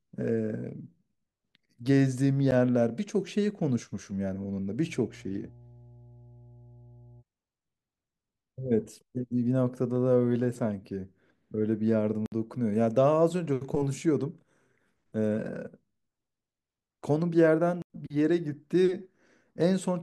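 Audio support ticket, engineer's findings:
Block of digital silence at 2.51 s. Sharp tick, about 12 ms, fits one unfilled 512-sample output buffer. Buffer underrun in playback/render path.
Block of digital silence, 12.26–12.32 s (60 ms) and 17.82–17.90 s (80 ms). Short holes. Same mechanism: output not filled in time, zeros written.
Differs from a fade or concealed dropout: silent floor, no ramp in or out, no smeared or repeated audio across the gap.

Mains hum, 4.77–7.24 s. Steady 60 Hz tone, roughly 25 dB below the speech. Likely a ground loop or nearby transformer coupling the power line into the analogue input or cabling. Differs from rumble or handling noise: fixed pitch, constant level, no bursts.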